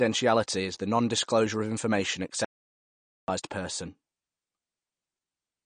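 Throughout, the speech carries MP3 compression damage: nothing above 9.6 kHz, with watery, swirling artefacts, likely from encoding at a low bitrate around 40 kbps. At 2.45 s, just after "of information", an audio dropout to silence leaves 0.84 s of silence until 3.28 s, likely from a lost input.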